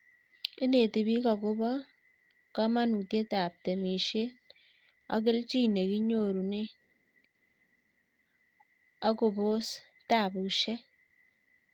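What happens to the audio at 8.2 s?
Nothing goes wrong at 8.2 s; the speech runs through that moment intact, with no dropout, click, distortion or other fault to be heard.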